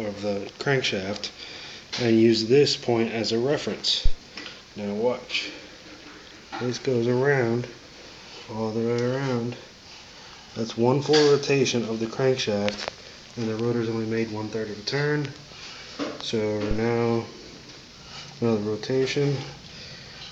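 At 4.06 s and again at 16.71 s there is a phantom power thump: a supply switched on or off on a live input, its voltage step pushed through the coupling capacitors as a deep thud. The first peaks near about -6 dBFS and dies away in about 19 ms. The second, at about -15 dBFS, fades over about 26 ms. Each shows as a sharp, one-sided waveform excursion with a short tail, and as a brief low-frequency smear on the spectrogram.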